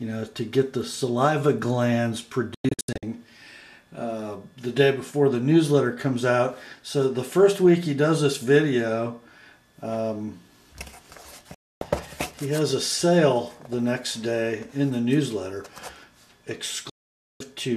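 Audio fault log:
2.54 to 3.03 s, 11.54 to 11.82 s, 16.90 to 17.41 s: digital broadcast dropout. The receiver mutes with a quick 3 ms fade wherever frames arrive corrupt. The first one breaks into several short holes over about 480 ms, and the later two are single gaps of 264 and 504 ms. The sound for those stretches is simply gone.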